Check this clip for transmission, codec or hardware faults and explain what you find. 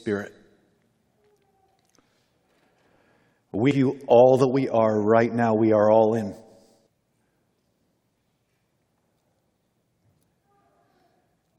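Two brief faults at 3.71 s and 6.87 s, both damaged data in a compressed stream: corrupted bytes make the decoder misread frames and lose sync, giving a short chirp or blip.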